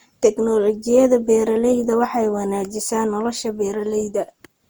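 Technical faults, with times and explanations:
Throughout, generation loss: likely about seven passes through a lossy codec, fitting Opus near 64 kbit/s; stacked requantisation makes the speech swirly and hollow, with blurred attacks.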